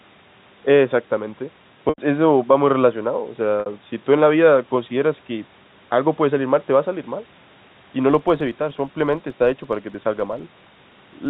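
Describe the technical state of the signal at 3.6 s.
At 3.60 to 3.66 s there is packet loss with pitch repetition. About 60 ms of signal is missing, which fits two lost packets. The receiver repeats the last pitch period, so the sound briefly holds with a buzzy quality and fades before the audio resumes.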